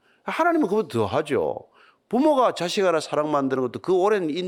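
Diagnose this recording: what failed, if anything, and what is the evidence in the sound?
Nothing in this speech recording stood out as a fault on listening.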